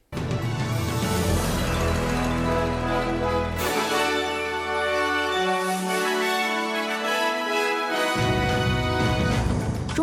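Nothing stood out as a technical problem on listening to the audio.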